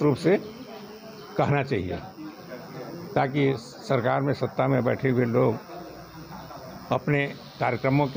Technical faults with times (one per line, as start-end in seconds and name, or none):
none